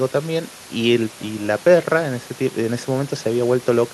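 No technical faults are audible anywhere here.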